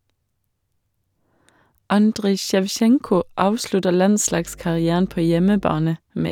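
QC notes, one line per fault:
4.25–5.87 s, mains hum: a steady low 50 Hz tone rises under the speech, sitting roughly 25 dB below it, with some low harmonics. Power-line current is coupling into the signal path, such as through a ground loop or a nearby transformer.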